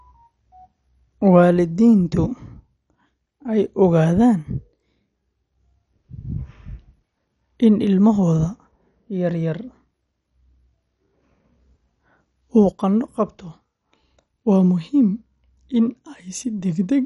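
A speech recording that sounds dull and gurgly from start to finish, with a granular roughness clinging to every syllable. The likely cause is MP2 compression at a low bitrate, consistent with about 48 kbps. Layer II divides the spectrum into 32 sub-bands, and with so few bits the upper ones are dropped while the rest are coarsely quantised. A spectrogram shows a hard ceiling at 11.3 kHz, with blocky, flickering patches in the bands beneath it.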